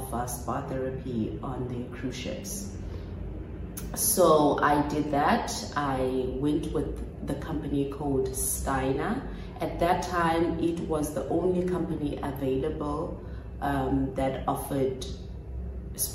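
Nothing is technically wrong with this audio.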